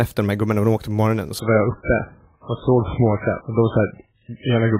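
A speech clip that switches abruptly at 1.39 s, right after "de åkte på morgonen", to an adaptive stream at a lower bitrate for the rest of the clip. From there nothing above 3.8 kHz remains and codec artefacts rise, which fits a drop from roughly 128 kbit/s MP3 to about 8 kbit/s as the connection slowed. Unlike a dropout or packet loss, there is no gap. Unlike a plain low-pass filter, the step arrives together with coding artefacts.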